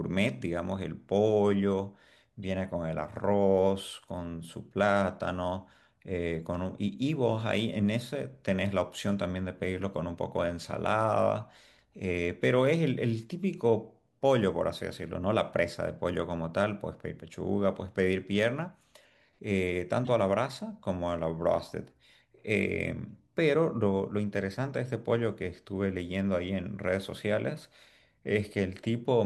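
At 20.05 to 20.09 s a corrupt frame was decoded: damaged bits in a couple of compressed frames misplaced spectral energy, giving a brief chirp, squeak, blip or burst of noise peaking around -25 dBFS.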